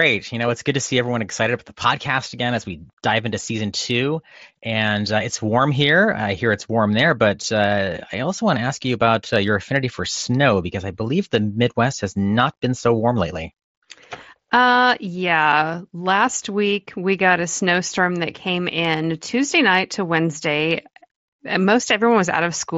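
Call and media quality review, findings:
Nothing to flag here: the speech comes through fine, carried over what sounds like a wideband Bluetooth headset link with no problems turning up anywhere.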